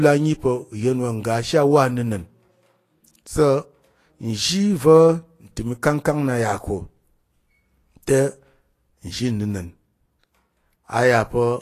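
Vorbis compression throughout: nothing above 14.2 kHz and a hissy, grainy treble, likely from a low-quality Vorbis encode, consistent with roughly 33 kbps, that replaced fine detail with noise.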